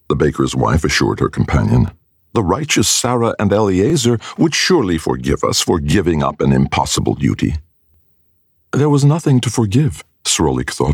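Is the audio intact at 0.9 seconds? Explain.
Yes, at 0.9 seconds the audio is intact, with no dropout, glitch or other fault to be heard at that moment.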